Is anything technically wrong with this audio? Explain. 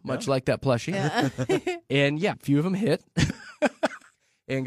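Yes. Compressed frames are skipped three times, at 0.89 to 0.94 s, 2.28 to 2.34 s and 3.25 to 3.30 s. The decoder never plays a run of frames, either lost from the file or rejected as damaged. With 46.4 ms frames, the jumps sound like roughly half a second missing at the first two points and about a third of a second at the third.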